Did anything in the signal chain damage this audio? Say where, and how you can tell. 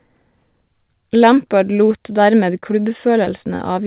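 Yes, at the network stage: short concealed packet loss at 2.60–2.64 s, 3.24–3.28 s and 3.56–3.61 s. Each is a brief smear where 20 ms of speech went missing, which fits single lost 20 ms packets. The decoder extended the preceding sound across each gap, then blended back.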